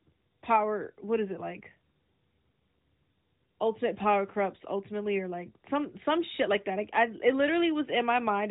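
No faults in this speech; the AMR narrowband mobile codec path holds everything below 4 kHz as that codec should, with only the light coding texture that fits its 12.2 kbps mode.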